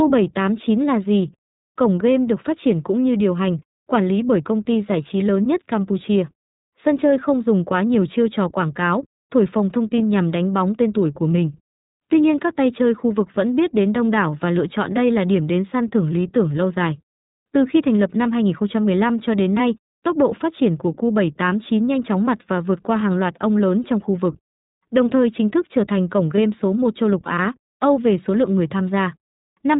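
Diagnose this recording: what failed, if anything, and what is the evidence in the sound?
At the codec stage, the speech is band-limited with nothing above 4 kHz, and it sounds slightly rough and synthetic throughout. This is plainly audible damage from the iLBC codec, which codes each frame's excitation independently. The sound fits its 15.2 kbps, 20 ms mode. On a spectrogram, all energy stops at a flat 4 kHz ceiling.

At the network stage, lost iLBC frames show up at 9.97 s and again from 26.36 to 26.39 s. Each is a roughly 20 ms held, faintly buzzy vowel-like patch, which fits a single dropped packet. The decoder repeated the last pitch cycle mixed with noise. Because frames stand alone, the speech recovers immediately afterwards. The waveform shows near-identical repeated periods at each point, and the spectrogram shows a brief, smeared harmonic stripe.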